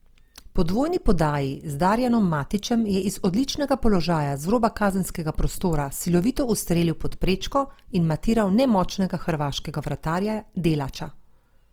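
Low-bitrate encoding has likely damaged this speech recording through Opus compression, applied across the whole clip. The grain is consistent with the music-oriented CELT mode at a rate around 24 kbps. With too few bits, the encoder keeps each band's overall energy but fills the fine detail with folded copies of lower bands or noise. Bandwidth stays full, so there's no muffling, but the speech turns plainly rough and grainy rather than swirly.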